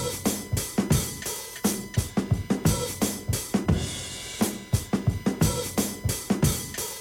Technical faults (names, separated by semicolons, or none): USB whine